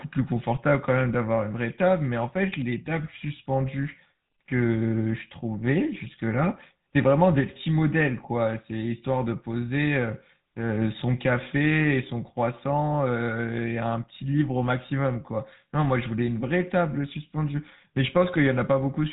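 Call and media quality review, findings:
Buzzy, gravelly speech throughout, no content above 3.8 kHz. GSM full-rate codec in the path, consistent with 13 kbps. Pulse-driven vocal-tract model on sparse excitation, plainly audible roughness.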